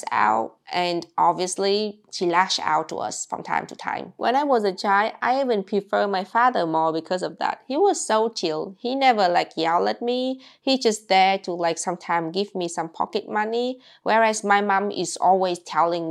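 No audible technical faults are present in this clip.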